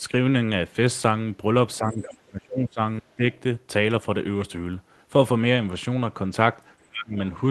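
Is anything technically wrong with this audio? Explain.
Yes. The speech is suppressed in double talk three times: from 1.78 to 2.8 s, from 3.0 to 3.23 s, and from 6.82 to 7.17 s. The likely cause is an echo canceller that could not tell the near talker from loudspeaker echo while both sides spoke, so it pulled both down. The speech drops by about 25 dB in the first two stretches and by about 30 dB in the last, dipping or vanishing in pieces.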